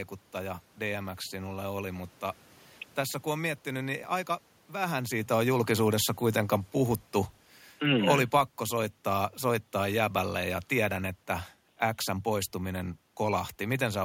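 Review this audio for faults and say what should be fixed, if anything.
Automatic gain falling from 7.82 to 11.08 s, after "on julkisuudessa kuitenkaan puhuttu". The gain control judged the input too loud or its background noise too strong and eased it down about 4 dB, sinking speech and background together. Raise the threshold or slow the automatic gain control's attack.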